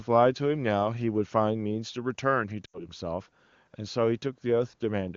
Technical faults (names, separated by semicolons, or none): lost AMR speech frames